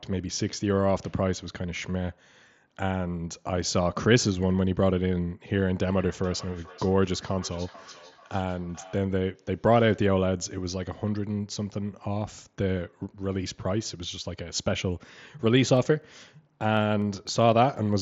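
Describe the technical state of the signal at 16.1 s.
At 16.1 s the speech carries periodic USB or driver dropouts, running from 15.77 to 17.77 s every 0.25 s. A blocked driver skips a fraction of a millisecond of audio each time, giving regular ticks. The spectrogram shows evenly spaced thin vertical broadband lines, and the waveform shows small abrupt jumps.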